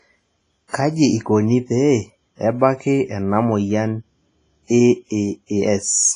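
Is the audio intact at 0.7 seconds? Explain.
No. From 0.68 to 0.73 s there is pre-echo: a hiss of about 57 ms arrives ahead of an attack, which sounds smeared. The coder spread quantisation noise sized for the loud onset across its whole transform block, filling the quiet gap before it. That points to heavy WMA compression, the likely cause, which runs throughout the clip. It leaves nothing above 10.5 kHz and a washy, ringing texture with hiss that rises and falls with the speech, consistent with a low bitrate around 24 kbps.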